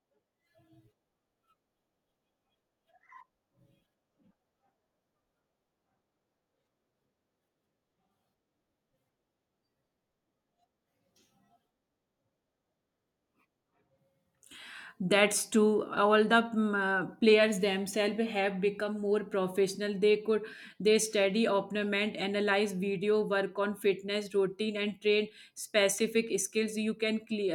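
No technical faults are audible.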